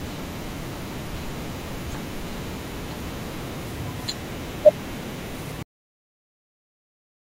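At 5.63 s the speech just stops dead, a cut-off end. The last stretch of audio was never written out, so the sound is chopped mid-stream and drops straight to digital silence with no natural decay, staying flat through to the finish.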